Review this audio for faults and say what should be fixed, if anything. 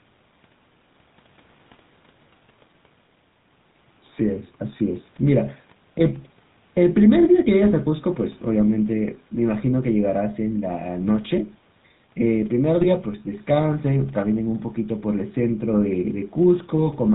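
The speech runs through the GSM full-rate codec for the whole clip, with plainly audible damage. The coder rebuilds the voice from a vocal-tract filter driven by a regular pulse train that keeps only every third excitation sample, so the sound has the buzzy, gravelly roughness that fits 13 kbps GSM full rate. Nothing above 4 kHz survives, so sibilants and consonant detail are dulled. To prevent it, capture or route the audio over a wideband path rather than a GSM full-rate link.

GSM bit errors break up the sound from 12.81 to 12.87 s. Over that span of about 56 ms the voice turns into a brief squawk and gargle. The span fits roughly three 20 ms frames hit by corrupted bits, at an error rate around 0.6 percent. Flipped bits in the decoded filter, pitch and gain values distort the spectrum and level of those frames. To prevent it, use a stronger radio link or stronger channel coding, and conceal corrupted frames instead of decoding them.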